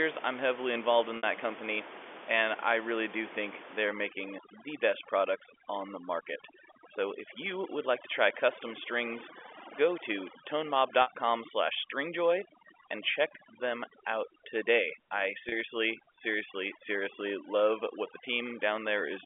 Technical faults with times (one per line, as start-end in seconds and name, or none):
1.17-1.23 packet loss with pitch repetition
3.85-19.25 overdone noise removal
11.02-11.07 packet loss with pitch repetition
15.49-15.52 packet loss with pitch repetition